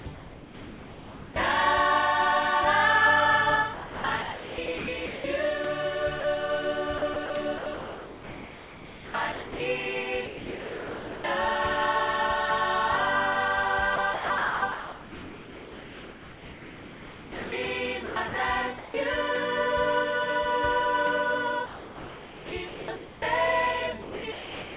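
The sound drops out and the background turns flat and synthetic six times: 0.00–1.36 s, 3.74–5.24 s, 6.20–11.24 s, 13.96–18.94 s, 21.66–23.22 s and 24.02 s to the end. This is likely sound chopped by the voice detector, which repeatedly stopped sending and filled about 0.7 to 3.5 s per stretch with comfort noise. Throughout, nothing is heard above 4 kHz, which fits a narrowband call codec such as G.711.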